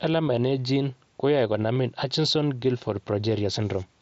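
Speech, carried over an mSBC headset link with its 8 kHz ceiling, shows concealed Bluetooth headset packet loss at 0.36 s and 1.75 s. Each single lost 7.5 ms packet was patched with repeated recent waveform, leaving a faint smear rather than the hard gap or click of a plain dropout.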